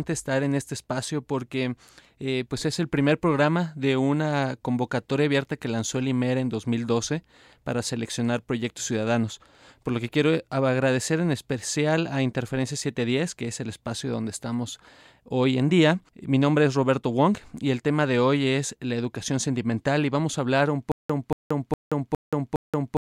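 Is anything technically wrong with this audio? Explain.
Yes. Stutter with silent gaps starts at 20.92 s, just after "vamos a hablar un", and lasts to the end. A 232 ms burst of speech repeats five times, every 410 ms, with 178 ms of dead silence between repeats. This is likely a stalled stream replaying its last fragment on each retry, so the speech that should follow is lost.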